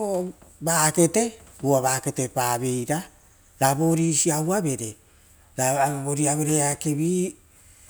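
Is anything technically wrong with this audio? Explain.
No, nothing technically wrong can be heard in this speech recording, and the signal stays steady and intact throughout.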